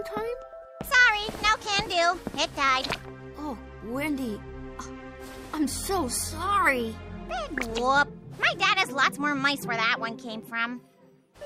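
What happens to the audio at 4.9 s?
Nothing goes wrong at 4.9 s; the audio is intact at that moment.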